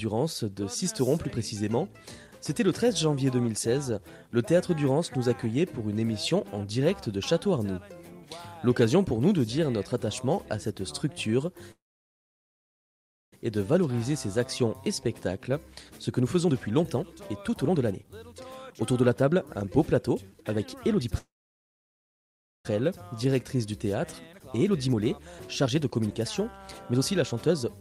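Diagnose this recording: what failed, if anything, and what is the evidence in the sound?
Network stage: at 11.71–13.34 s and 21.18–22.67 s the sound trails off into near-silence and then resumes where it stopped, likely a call audio freeze from late packets.

Jitter buffer speed-up: from 15.90 to 21.06 s, 22.80 to 25.12 s, and 25.63 s to the end, the audio runs 115–122% fast at unchanged pitch as short pitch periods are removed.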